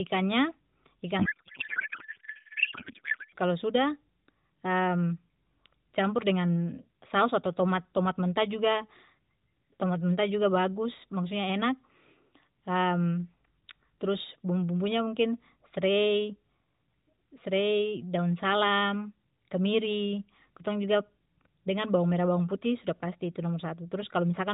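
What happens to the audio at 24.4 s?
At 24.4 s the speech simply continues through the narrowband mobile codec path with no dropout, glitch or other fault at that point.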